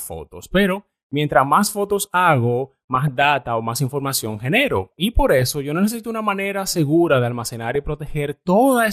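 Throughout the speech, the audio has likely passed through MPEG Layer II (MP2) compression at a low rate, which fits an 80 kbps stream. The codec divides the signal into 32 sub-bands and, short of bits, shuts off the upper ones and quantises the rest coarsely. That leaves the speech plainly dull, with a granular, gurgling edge as bands drop in and out.

Three bursts of DAB burbling follow, where bit errors at a small fraction of a percent slipped past error correction and corrupted samples in the MP2 data, putting short blips of noise in single sub-bands. From 2.95 to 3.36 s, after "mientras más fotos hago" and before "o más información genero", bubbling, squelchy chirps sit over the speech. A shorter blip at 5.39 to 5.50 s comes just before "yo necesito una manera". From 7.45 to 7.76 s, after "una manera segura de", the muddy bubbling returns.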